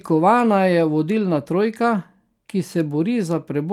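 A speech recording with no audible technical faults.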